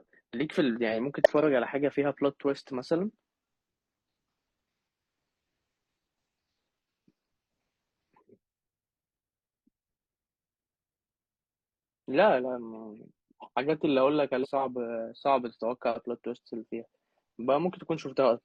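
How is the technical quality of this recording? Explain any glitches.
The speech recording has three short glitches from damaged data in a compressed stream, at 1.17–1.27 s, 14.40–14.47 s and 18.33–18.38 s. Corrupted bytes made the decoder misread frames and lose sync until it found a valid header again, producing brief glitches lasting 60–100 ms.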